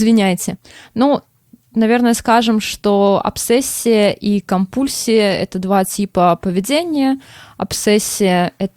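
A speech recording with no audible technical fault anywhere in the signal.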